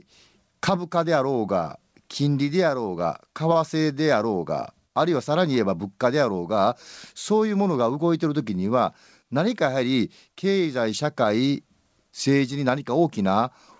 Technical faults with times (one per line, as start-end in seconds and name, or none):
3.53-3.59 short stall from a late packet